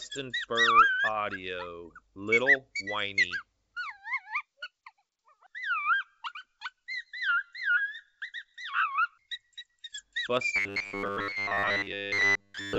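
From 10.56 s to 12.78 s the sound turns into a rigid, metallic buzz at 100 Hz, the robotic sound from repeated short buffers, likely caused by delayed packets: a roughly 10 ms fragment loops for most of that stretch while the real audio is skipped.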